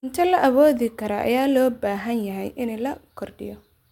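No technical faults can be heard anywhere in this recording.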